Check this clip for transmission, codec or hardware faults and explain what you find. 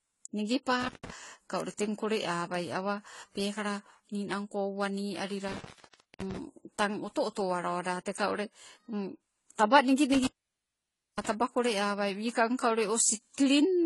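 The speech has three kinds of fault: layered codec damage throughout, three contact dropouts and two isolated ticks.

Transcoding between lossy codecs: for the whole clip the speech sounds smeared and watery, with nothing above 11.5 kHz. That mix of artefacts is likely from low-rate HE-AAC re-encoded to AAC-LC, which fits roughly 20 and then 32 kbit/s.

Intermittent contact: the sound cuts out with crackle at the edges from 0.81 to 1.10 s (open about 0.15 s), 5.48 to 6.37 s (about 0.55 s) and 10.14 to 11.29 s (about 0.91 s). Each time a loose connection briefly opened, leaving faint hiss.

Bit error spike: single sharp clicks at 1.60 s and 10.25 s, the second falling inside the last dropout. Each is one flipped bit in a single sample, a broadband tick unrelated to the speech.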